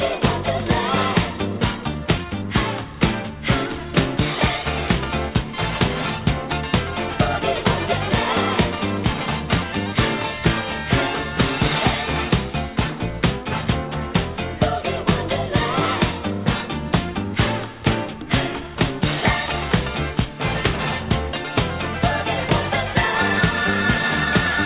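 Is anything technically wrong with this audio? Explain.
Yes. Throughout, the audio shows aliasing. The rate was cut without filtering, which points to a drop to about 8 kHz, so content above 4 kHz folds back as gritty, metallic, unrelated tones, fairly strong relative to the signal. Unlike plain band-limiting, which sounds dull, this stays harsh right up to the edge.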